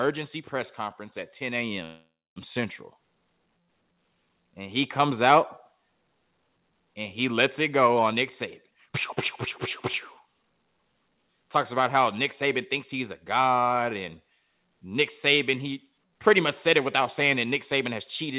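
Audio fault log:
1.84–2.38 s, call audio freeze: the sound stalls for 0.52 s. The last sound is stretched into a fading buzz or hiss, then 0.24 s of silence follows. The audio resumes where it stopped, with nothing lost. Delayed packets likely emptied the jitter buffer.
8.63–8.93 s and 10.24–11.98 s, jitter buffer speed-up: the sound hurries at the same pitch. It runs at 159% speed, then 114%, and about 200 ms and 300 ms are cut. The receiver trims pitch periods to shed built-up delay.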